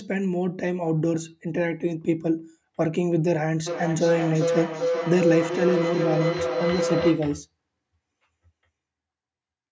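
From 3.66 s to 7.35 s a feedback howl builds up over the speech. Two devices in the same room are sharing the call, so the loudspeaker feeds back into the microphone, and each round trip comes back a little louder. The tone narrows to a ringing pitch around 500 Hz with repeats roughly every 400 ms and peaks at about 2 dB below the speech. It cuts off once the loop is broken. The call's microphone processing is audible throughout, with nothing above 8 kHz.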